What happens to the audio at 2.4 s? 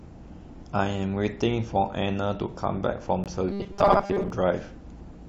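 Nothing goes wrong at 2.4 s; the speech runs through that moment intact, with no dropout, click, glitch or other fault.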